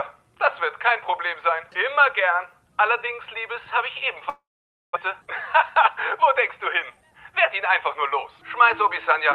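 From 4.29 to 4.97 s there is a gap, likely a long network dropout. The last sound carries on as a fading buzz or hiss, then about 0.51 s of silence follows, and roughly 0.4 s of audio never returns. The waveform shows a decaying tail into a flat line, and the spectrogram a blank vertical band.

From 5.13 to 8.27 s a jitter buffer speed-up sheds around 200 ms of built-up delay by cutting out short pitch-period slices. The audio runs about 7% fast at unchanged pitch and sounds hurried. On the spectrogram the harmonics stay level while events crowd closer, and the waveform shows tiny splices.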